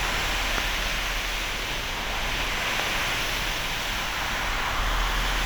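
Two sharp, loud pops, single clicks rather than pairs, jump out at 0.58 to 0.60 s and 2.80 to 2.82 s, each about 20 dB above the audio, which carries on underneath. Each is likely a brief voltage spike from a plug, switch, static or driver glitch.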